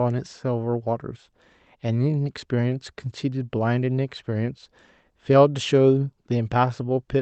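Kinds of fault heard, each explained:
Clock drift between sender and receiver, throughout: the sender's clock runs roughly 3% slower than the receiver's, so the jitter buffer keeps draining and the receiver must fill in by repeating short pieces of audio, producing small, unevenly spaced hiccups across the whole speech clip.
Repeated timing corrections, 0.46 to 7.08 s: to stay in step with the slow sender, the receiver keeps inserting short repeated slices, so the speech plays at 97% speed and gains about a fifth of a second.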